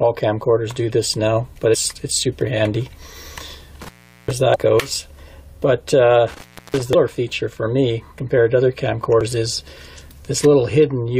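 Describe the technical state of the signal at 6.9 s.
Right around there you've got two things back to back. First, an intermittent contact from 6.28 to 6.82 s: a loose plug or cable lets go for roughly a third of a second (about 335 ms open), so the audio drops out with a little crackle where the connection breaks and remakes, and faint hiss fills the gap. Then at 6.93 s there's damaged data in the compressed stream. Part of the data in the file is corrupted, the decoder misreads that frame, loses its place and hunts for the next header. You hear a brief glitch as it locks back on.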